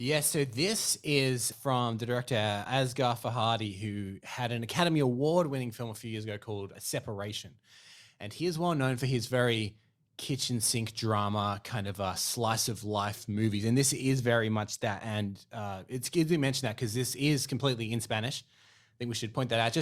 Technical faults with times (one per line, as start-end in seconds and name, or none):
none